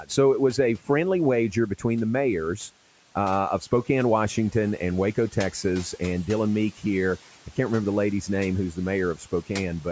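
Right near the end, between 9.15 and 9.5 s, the noise suppressor cut into the speech, taking roughly 150 ms of it for background and pulling it down by up to about 11 dB, so those bits sound swallowed and faint against the room noise.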